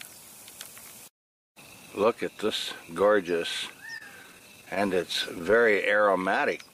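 Repeated stalls (stutter) run from 3.97 s to 5.75 s: packets reached the receiver late, so its jitter buffer emptied eighteen times, and each time it stretched out the last sound to fill roughly 195 ms in total, about 11% of that span. No gap exceeds 30 ms and nothing is lost, yet the audio stumbles and drags. Then a jitter buffer slow-down appears from 5.97 s to 6.41 s, as the receiver rebuilt its reserve by repeating single pitch periods or slices of pauses, adding 58 ms and playing that stretch at 89% speed, drawn out but at unchanged pitch.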